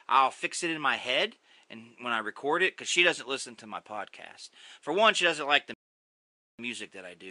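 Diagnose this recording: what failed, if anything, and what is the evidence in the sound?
Playback rebuffering stall: the speech halts into silence from 5.74 to 6.59 s, then resumes exactly where it stopped. Unlike a dropout, nothing is lost; about 0.85 s is added.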